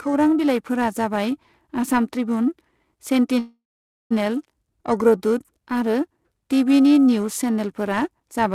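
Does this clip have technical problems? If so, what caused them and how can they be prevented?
Yes. Periodic clock jitter runs throughout: a clock wobble around 1 kHz puts sidebands beside every component, giving a metallic edge that disappears in pauses, unlike steady hum. Prevent it by shielding and cleaning the converter's clock supply.

A call audio freeze spans 3.39 to 4.13 s. The sound stretches into a fading buzz or hiss, then about 510 ms of silence, and resumes where it stopped, likely because delayed packets emptied the jitter buffer. Unlike a dropout, nothing is lost; the speech simply arrives late. Prevent it with a more stable network route or a deeper jitter buffer.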